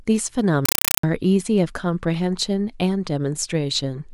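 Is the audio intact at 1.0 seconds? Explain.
No. A compressed stream played as audio covers 0.65 to 1.03 s: an undecoded Dolby Digital bitstream is taken as plain samples, so 5.33 ms noise bursts with silent padding repeat 31.25 times a second, giving loud, chattering static in place of the speech.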